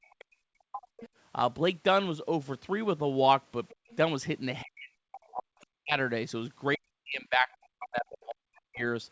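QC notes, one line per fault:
0.07–0.83 s, 3.73–3.91 s, 4.62–5.98 s, 6.76–8.83 s: speech suppressed in double talk. The echo canceller likely could not tell the near talker from loudspeaker echo while both sides spoke, so it clamped the microphone signal as a whole. The voice sinks by as much as about 40 dB, thinning and breaking into fragments across roughly 0.7 s, 0.2 s, 1 s and 2 s of the four spans, the last being the longest dropout.
0.97–1.09 s, 3.69–3.96 s, 5.13–5.65 s, 8.57–8.61 s: other side's voice leaking through. The echo canceller likely left residual loudspeaker pickup in the microphone path, so a second, fainter voice sits under the talker. It is about 20 dB below the speech at 0.97 s and 5.13 s, about 30 dB below at 3.69 s, and only a brief scrap about 40 dB down at 8.57 s.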